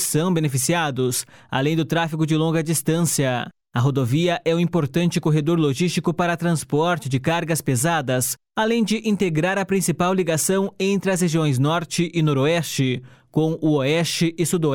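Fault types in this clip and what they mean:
Nothing stood out on listening to the clip.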